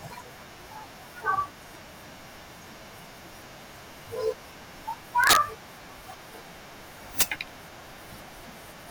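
Integer overflow at 5.24–5.36 s and 7.21 s: speech peaks about 6 dB past the integer limit wrapped to the opposite sign, producing violent cracks far harsher than clipping.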